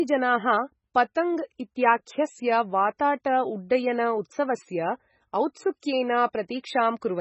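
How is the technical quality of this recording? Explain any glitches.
Quality is rough, with heavy codec damage throughout and one smeared attack.

The whole clip sounds watery and swirly, with nothing above 8 kHz, likely from MP3 compression at a very low bitrate, around 16 kbps.

At 2.99 s there's a pre-echo: codec noise spreads about 10 ms ahead of a sharp attack, leaving a brief hiss and a softened onset.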